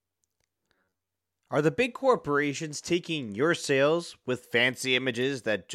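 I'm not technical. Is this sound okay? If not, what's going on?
No. At 0.75 to 1.07 s the speech turns into a stiff, metallic buzz that still roughly follows the talking. This is robotic sound from repeated short buffers. The likely cause is audio arriving too slowly, so the player kept repeating tiny snippets, about half of what you hear there, instead of the real sound. Those repeats force a steady hum of about 94 Hz, which fits a repeated chunk about 11 ms long. The tell is that it lasts a third of a second at one fixed pitch.

At 5.22 s there is a quick squeak or blip. This is a corrupt frame decoded: a couple of small packed chunks of audio were damaged, and the player played them anyway, putting sound at the wrong pitches for an instant. Unlike the robotic section, it is a single brief burst rather than a sustained, even buzz riding along with the voice.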